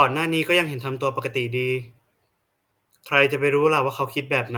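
A speech clip with clock drift between sender and receiver running through it: the sender's clock runs about one and a half percent slow, so the receiver's jitter buffer keeps draining and has to be topped up. Unlike a sample-rate mismatch, the pitch stays put, because the receiver stretches the audio with small edits rather than resampling. Those edits are the repeated timing corrections, heard from 0.28 s to 4.52 s. Short fragments are repeated at irregular intervals, always in the same direction, so playback runs at about 98% speed and gains roughly 70 ms over the stretch. Each repeat is tiny and is heard, if at all, as a slight hiccup or a drag in the tempo, not an obvious stutter. That sets it apart from a jammed buffer, where one piece would loop audibly.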